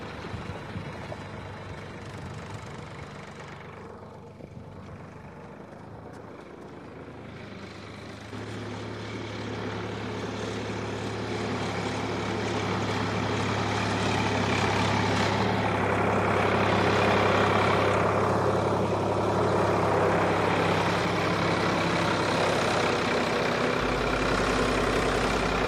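From 0 to 2.0 s, adaptive stream starting at a low bitrate: thin, synthetic treble and stronger artefacts, pointing to roughly 20 kbit/s HE-AAC, then an abrupt, gapless step up to fuller AAC quality.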